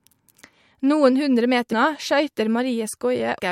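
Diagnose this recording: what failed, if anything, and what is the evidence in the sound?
At 1.71 s the speech jumps ahead through a soft, smeared blip, losing roughly 300 ms. This is compressed frames skipped at the codec: about ten 26.1 ms frames were never decoded.

At 3.39 s a brief decoding glitch interrupts the speech. The likely cause is a broken MP3 bit reservoir, where a frame after a cut reads another frame's borrowed bytes.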